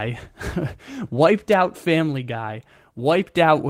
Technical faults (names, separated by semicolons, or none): electrical switching spike